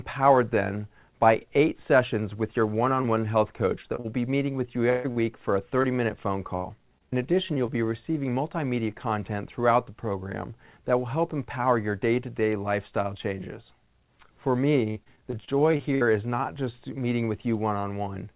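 From 3.02 to 7.7 s, repeated packet loss makes the sound choppy and robotic. About a dozen short holes, the longest 139 ms, are each patched by extending the preceding sound. It recurs from 14.9 to 16.03 s with denser, shorter gaps of up to 57 ms, covering a fifth of that span, within a band that stops at 4 kHz.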